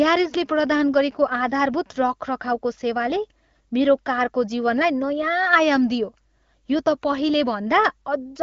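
No technical faults occur in this speech, which comes through an AMR wideband (HD Voice) codec path running as intended at 12.65 kbit/s.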